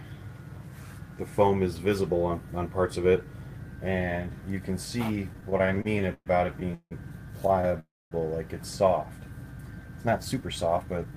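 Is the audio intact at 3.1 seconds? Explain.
Yes, the audio is intact at 3.1 seconds, with no dropout, click, distortion or other fault to be heard at that moment.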